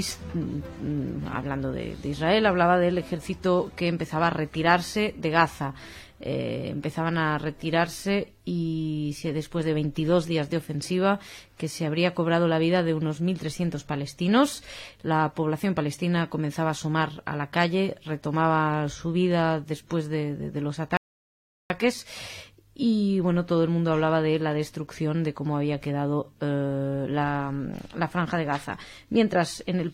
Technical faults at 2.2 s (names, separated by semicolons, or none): none